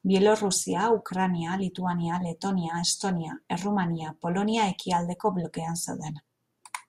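No technical faults are audible anywhere in the recording.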